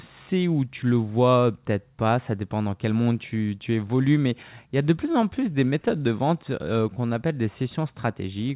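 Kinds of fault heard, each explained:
Repeated stalls (stutter): Between 5.04 and 6.12 s, late-arriving packets left the jitter buffer empty twelve times, each gap filled by continuing the last sound, 118 ms in all and none longer than 15 ms. Nothing is lost, which sets it apart from packet-loss dropouts.
Jitter buffer slow-down: From 6.94 to 7.29 s the receiver repeated short pitch periods to rebuild its reserve, adding 48 ms so the audio runs at 88% speed with pitch unchanged. It drags smoothly rather than stopping and restarting as in the stutter.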